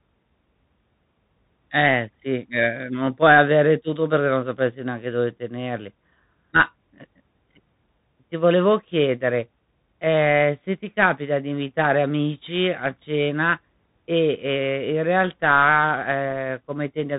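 The speech sounds narrow and muffled from start to finish, with nothing above about 3.8 kHz, a grainy hiss beneath it, scratchy s sounds, and rough distortion on loud bright moments. These are the marks of a Bluetooth CVSD headset codec, which fits the 64 kbps CVSD link. It sends one bit per sample, saying only whether the signal steps up or down with an adapting step size, so fast loud changes outrun it and the coarse steps leave audible grain.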